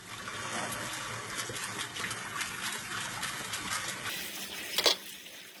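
A recording of everyday sounds, likely squeezed through heavy HE-AAC compression, which fits a bitrate near 16 kbps. Its treble is rebuilt from lower bands, so the top sounds gritty and metallic. From 4.09 s to the end, a section at the wrong speed, likely from playback against the wrong clock, runs 1.69 times fast, so it sounds hurried and nearly ten semitones higher.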